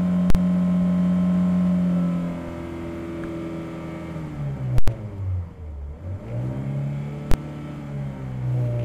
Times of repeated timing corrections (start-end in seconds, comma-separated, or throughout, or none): none